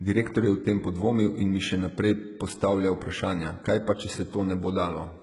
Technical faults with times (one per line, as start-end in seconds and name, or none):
0.00-5.22 HE-AAC compression